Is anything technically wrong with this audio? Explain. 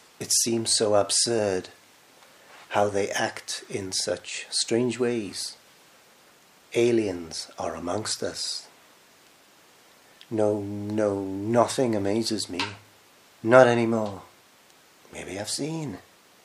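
No, nothing technically wrong can be heard in this audio. The sound carries on without any break, added noise or change in quality that would point to a problem in how it was captured or delivered.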